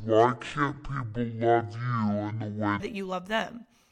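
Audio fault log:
0.00–2.80 s, section at the wrong speed: the speech runs at about 0.52 times its proper rate, so pitch falls by roughly ten semitones and everything sounds deep and dragged, likely from playback against a mismatched clock, until normal speed returns at "that you love them".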